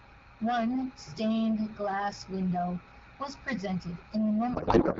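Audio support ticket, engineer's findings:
Codec payload misread, 4.54 s to end: speech collapses into garbled warble. Octet-aligned AMR frames read as bandwidth-efficient, so fields land misplaced. AMR-WB at 12.65 kbit/s is clear before.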